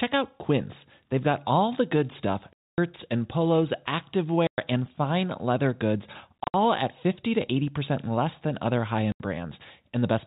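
Lost packets were replaced with silence (packet loss filled with silence). This cuts hard-edged holes into the speech at 2.53 s (250 ms, after "all the good stuff"), 4.47 s (110 ms), 6.44 s (scattered gaps) and 9.12 s (80 ms). The gap lengths are multiples of 10 ms, which fits 10 ms packets.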